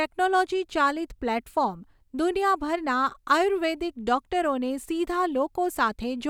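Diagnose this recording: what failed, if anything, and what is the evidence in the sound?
Clock slip clicks run from 0.12 s to the end of the speech at 6.29 s: faint, evenly spaced ticks roughly every 50 ms, clearest on loud sustained stretches and vanishing in pauses. The cause is likely two unsynchronised clocks at a converter or driver boundary, off by something like 500 ppm, so one sample slips about 150 times. A spectrogram shows regularly spaced thin vertical broadband lines; the waveform shows tiny single-sample steps.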